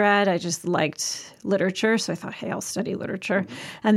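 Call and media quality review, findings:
No faults heard in this speech recording.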